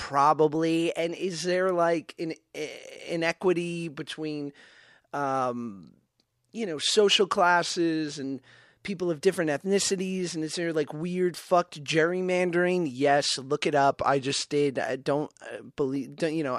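From 0.55 to 1.31 s, just before "there like an", the speech runs about 5.9% fast and sits roughly a semitone sharp, then snaps back. From 7.61 to 8.24 s, between "um you know social" and "people of different ethnicities", and again from 13.91 to 14.52 s, before "did I don't", it runs 5.9% slow and about a semitone flat. The likely cause is a drift correction step, where clock-matching software briefly changed the playback rate to rebalance its buffer.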